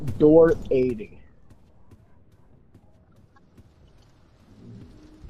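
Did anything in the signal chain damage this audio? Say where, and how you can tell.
Yes. From 0.64 to 1.32 s a fast ticking, a zipper noise, rides on the sound as its level falls by roughly 20 dB, at something like fifteen ticks a second. The damage is at the driver or buffer stage, where gain is applied. The drop happens in 2 dB jumps with no smoothing between them. Each sudden jump puts a small discontinuity in the waveform, so every step is heard as a click.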